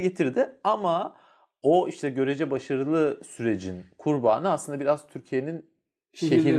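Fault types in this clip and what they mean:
Nothing stood out on listening to this speech recording.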